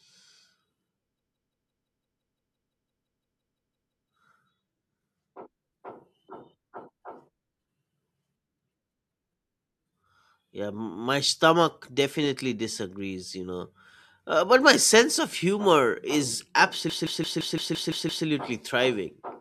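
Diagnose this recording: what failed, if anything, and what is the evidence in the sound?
A machine-gun stutter repeats one 0.17 s slice of speech at about 5.9 Hz from 1.2 to 4.1 s and again from 16.9 to 18.3 s, right after "sense of humor is". This is a system hang loop: the driver froze while the hardware replayed its ring buffer, which fits an 8192-sample buffer.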